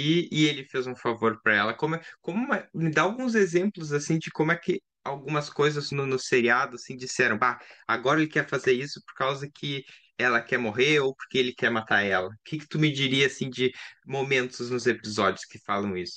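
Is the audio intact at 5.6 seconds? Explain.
Yes, at 5.6 seconds the speech runs intact, with no dropout, click, distortion or other fault at that point.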